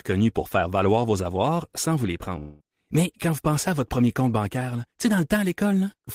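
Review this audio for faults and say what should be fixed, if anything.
From 2.39 to 2.63 s, after "avoirs sans vous les", speech dissolves into a fading buzz, likely a long network dropout. About 0.2 s is lost, far longer than a single packet-loss blip. A larger jitter buffer with forward error correction would help ride out such gaps.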